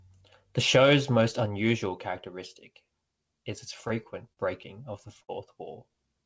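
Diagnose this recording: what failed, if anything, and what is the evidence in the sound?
Short stalls from late packets at 3.88–3.92 s (after "unusual characteristic is its"), 4.33–4.39 s and 5.23–5.30 s. The network jitter buffer ran empty, so held sound stretches 17, 40 and 51 ms.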